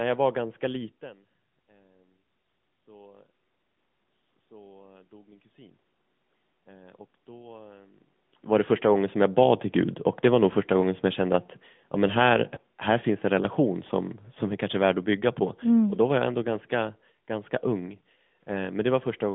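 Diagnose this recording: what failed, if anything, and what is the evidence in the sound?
The codec stage failed: the speech went through an AMR narrowband mobile codec for the whole clip. Nothing passes above about 3.6 kHz, and the usable band runs roughly 150 Hz to 3.5 kHz. The damage is plainly audible as a buzzy, synthetic edge. The room noise turns into a swirling texture. AMR-NB rebuilds the voice from a vocal-tract model driven by sparse pulses. At this quality the sound points to a mid rate around 10.2 kbps.

The second fault is in call processing: automatic gain rising. From 6.67 s to 10.03 s, voice and background swell together by about 6 dB. They rise over several seconds rather than jumping. The control judged the input too quiet and kept raising its gain. The background lifts along with the voice, and that separates it from the talker moving near 8.5 s, which changes only the voice level at the microphone.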